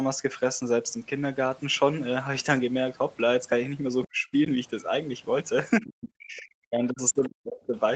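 From 4.09 to 4.27 s the speech drops by about 35 dB, and again from 5.81 to 7.76 s by up to about 40 dB, losing roughly one and a half seconds in pieces. This is likely speech suppressed in double talk, where the echo canceller turns down the talker while both sides speak. At 7.23 s a brief, faint scrap of a second voice, about 25 dB below the speech, is likely the other side's voice leaking through as residual loudspeaker echo.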